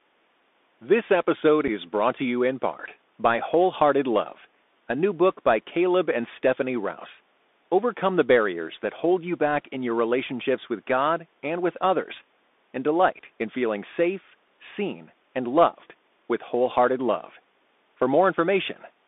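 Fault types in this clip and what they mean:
Bluetooth CVSD headset codec: narrowband one-bit-per-sample delta coding, so the speech sits in roughly 250 Hz to 3.6 kHz, with plainly audible scratchy s sounds and grainy hiss.
Unconcealed Bluetooth headset packet loss: one packet dropped near 1.68 s leaves an abrupt 7.5 ms hole with nothing filling it, heard as a brief click or gap.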